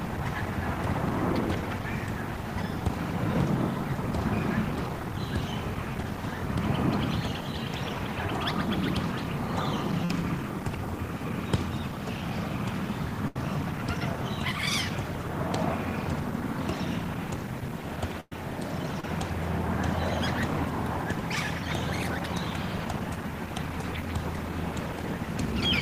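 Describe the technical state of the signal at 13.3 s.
A burst of packet loss hits at 13.28 to 13.36 s. Several consecutive packets never arrived in time, so the receiver covered the hole by extending the last sound it had and letting it fade, about 75 ms of concealment in all. When the stream picks up again it has jumped ahead, leaving roughly 70 ms of the original audio gone. The result is a brief smeared, decaying stretch followed by an abrupt resumption.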